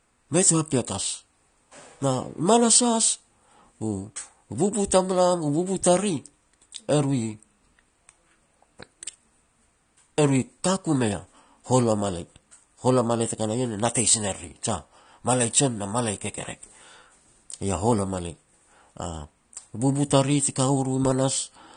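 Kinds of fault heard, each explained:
AAC compression: The speech sounds dull and smeared throughout. Sustained vowels have a watery, warbling texture, sibilants have a fizzy edge, and nothing at all sits above 9.7 kHz. This is likely AAC-LC coding at a low rate, consistent with roughly 32 kbps, where the encoder quantises coarsely and gives up the high bands. On a spectrogram, energy stops at a flat ceiling near 9.7 kHz, with patchy holes and blurred, blocky texture below it.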